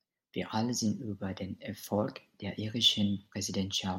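No technical faults can be heard anywhere in this speech recording.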